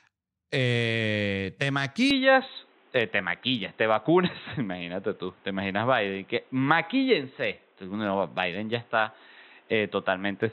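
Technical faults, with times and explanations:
2.11 to 10.52 s, input switched to a poorer device: just after "eh te" the speech turns abruptly duller and boxier and stays that way to the end. Nothing above 4 kHz survives, consistent with a narrowband capture path such as a headset call profile, which is the likely cause. There is no gap at the switch and the level holds steady, but a new background noise floor appears, sitting roughly 35 dB below the speech.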